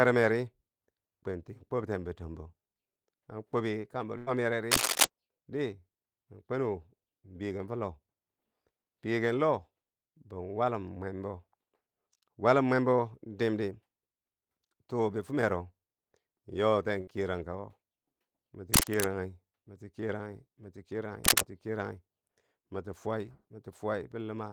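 At 4.17 to 4.29 s and again at 17.01 to 17.09 s, a burst of packet loss drops about 100 ms and then 60 ms of speech. The receiver covers each gap by holding and fading the last sound, a dull buzz or hiss rather than silence or a click, before the speech jumps ahead. Between 4.71 and 5.05 s, 18.73 and 19.04 s, and 21.24 and 21.42 s, cable scratch noise adds dense, ragged rustling at around 5 to 10 dB above the speech. This was likely caused by a loose connector or cable being moved. Unlike the packet-loss bursts, nothing of the speech goes missing here; the noise rides on top of it.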